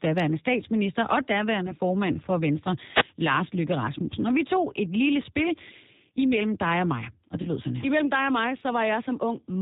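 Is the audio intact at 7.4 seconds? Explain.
No. From 7.42 to 7.50 s there is VoIP packet loss concealed by the speech codec. The gap fits about three lost 10 ms frames, roughly 30 ms. The decoder extended its last pitch and filter while lowering the gain, so the sound smears into a brief buzzy tone or coloured noise that fades. On a spectrogram this shows as flat, repeated bands. On the waveform it is a shrinking envelope that stays weak for a moment after the stream resumes.

Across the whole clip, including this point, G.729 codec damage is plainly audible. At 8 kbit/s the speech is rebuilt from a vocal tract filter, a pitch predictor and a few pulses per subframe. The result sounds slightly rough and synthetic. A spectrogram shows a hard ceiling with nothing above 4 kHz.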